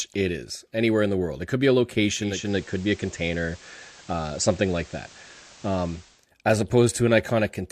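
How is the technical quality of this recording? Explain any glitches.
The recording has one glitch: a digital radio blending to analogue event running from 2.18 s to 6.28 s. The receiver lost its digital stream and cross-faded over about 384 ms to the station's FM broadcast, then returned later. A steady FM hiss sits roughly 25 dB under the speech, and the level shifts by about 1 dB.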